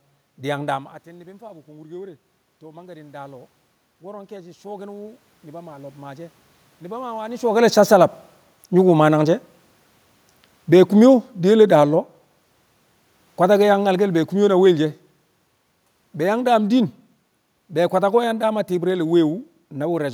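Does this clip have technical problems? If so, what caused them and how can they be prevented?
Yes. There is automatic gain rising from 1.05 to 7.53 s. Around 0.5 s the talker moves away and the input drops by about 19 dB. The gain control then raises its gain by 12 dB over six seconds. Voice and room noise swell together. To prevent this, keep the talker at a steady distance or use a slower, capped gain control.

There is also automatic gain falling from 10.58 to 12.23 s. After the talker moves around 7.5 s, the input is too loud for the raised gain. The control lowers it by about 3 dB. The voice starts loud and then sinks with its background. To prevent this, hold the microphone distance steady so the gain control has no reason to correct.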